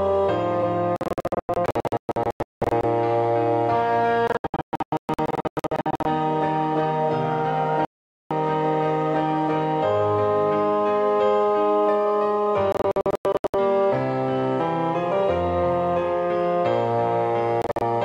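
Digital broadcast dropouts cut the sound five times. The receiver mutes whenever incoming frames fail, and that audio is lost. Bursts of short holes span 0.96 to 2.84 s, 4.27 to 6.06 s, 12.72 to 13.54 s and 17.62 to 17.82 s. One solid silence runs from 7.85 to 8.31 s.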